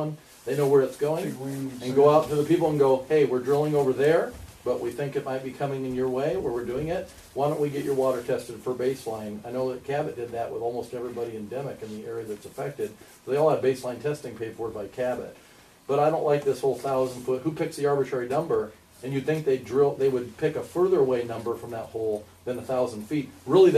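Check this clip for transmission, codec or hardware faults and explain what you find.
No transmission, codec or hardware faults can be heard anywhere in the clip. Nothing in the audio calls for any further explanation.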